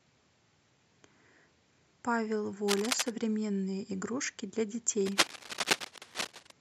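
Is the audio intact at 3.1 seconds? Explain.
No, 3.1 s is the very end of a burst of cable scratch noise that starts at 2.68 s. Dense, uneven scratching sits over the speech at roughly its own level, likely from a worn connector shifting its contact. It shows as ragged broadband streaks on a spectrogram and jagged spikes in the waveform.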